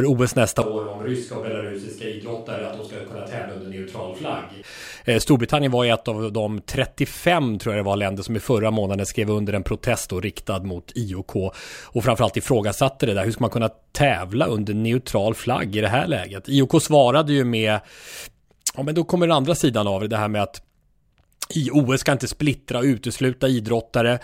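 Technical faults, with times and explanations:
0.62–4.62 s, switch to a distant microphone: the voice suddenly turns roomy, hollow and bass-light, about 10 dB quieter with room noise more audible, then snaps back. The close microphone likely dropped out. Unlike added reverb or a plain level dip, tone, room and noise all change together.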